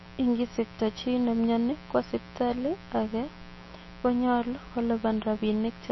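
A speech recording carries a steady, raspy mains buzz throughout, built on 60 Hz and sitting roughly 20 dB below the speech. Unlike a smooth hum, its sharp switching spikes spread harmonics up into the kilohertz range, giving a gritty edge rather than a pure low tone. The speech also sounds watery and swirly, with nothing above 5.8 kHz and smeared consonant attacks, likely from MP3 compression at a low rate near 25 kbps. The warbling weak detail is what sets it apart from a simple low-pass filter.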